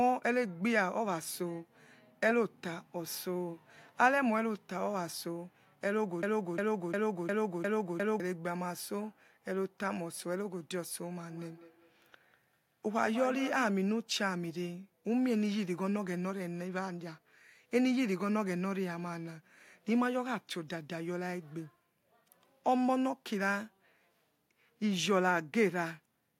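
From 6.23 to 8.20 s, a fragment of about 0.35 s plays six times in a row, identical each time and butted end to end, so the speech sticks in place like a scratched disc. This is a broken-record loop: a player, encoder or stream likely stalled and kept resending the last piece it held. Whatever speech belonged to those two seconds never arrives; the repeats stand in its place.

Between 11.3 and 13.8 s, each stretch of speech comes back again at an interval of roughly a fifth of a second, the returns thinner and more ringing than the original and peaking at about 12 dB below the speech. That is feedback echo between two devices: two devices in the same room share the call, one plays out what the other's microphone sent, and that microphone captures it again. Each device's echo canceller removes only its own playback, so the loop passes through.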